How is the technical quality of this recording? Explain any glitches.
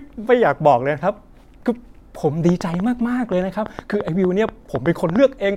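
The recording is marred by one glitch. From 2.49 to 5.17 s, a train of clicks ticks over the speech at an uneven 5.25 per second, around fifteen sharp pops standing roughly 10 dB above it, likely from equipment interference or a faulty connection.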